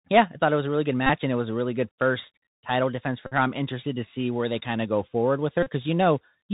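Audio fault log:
throughout: Bluetooth CVSD headset codec. The speech sounds like a 64 kbps CVSD headset link. Nothing above about 4 kHz comes through, so the sound is dull and narrow. The codec codes one bit per sample, up or down, with an adapting step. Fast, loud high sounds outrun that step and smear. S sounds turn scratchy, and a granular hiss sits under the speech. The damage is plainly audible.
1.07–1.10 s, 3.27–3.33 s, 5.63–5.70 s: Bluetooth headset packet repeated. Each time, a short buzz replaces the speech. The first follows "was a really good" and precedes "and it was a". The second follows "good first title defense" and precedes "her I'm interested to". The third follows "of go forward with". Voice packets were lost, and the chip kept decoding the last packet again. Repeating every 3.75 ms gives a buzz near 267 Hz.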